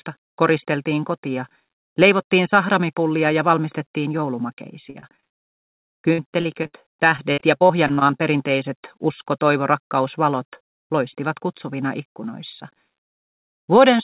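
From 4.9 to 6.75 s and again from 7.17 to 8.21 s, the audio breaks up with repeated packet loss (robotic sound). Packets keep going missing, and each hole is patched by stretching the sound just before it, so about a quarter of each stretch is synthetic fill. Gaps reach 70 ms in the first burst and 45 ms in the second. Unlike a single dropout, the holes come in rapid succession, giving a choppy stutter with pieces missing rather than one isolated blip. Throughout, the narrowband call path cuts everything above 4 kHz, which fits G.711.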